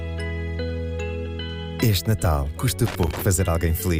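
An irregular burst of scratchy crackle breaks through from 2.86 to 3.22 s, chopping the sound unevenly for about a third of a second. This is loose connector crackle: a worn or dirty contact rapidly making and breaking, interrupting the signal.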